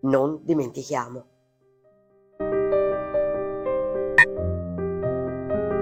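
At 4.18 to 4.25 s there's damaged data in the compressed stream: the decoder hits bad bytes, loses sync for about 64 ms and throws out a short, harsh blip.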